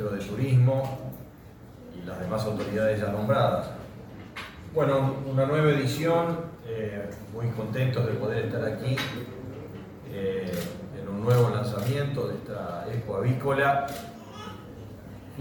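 No technical faults can be heard anywhere in this audio.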